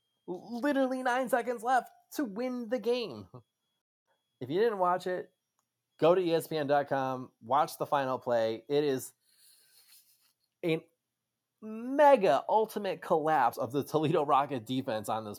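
Nothing technical goes wrong anywhere in this speech recording, so there's nothing to point to along the way.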